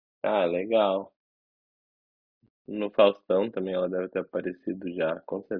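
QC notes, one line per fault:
No fault to report.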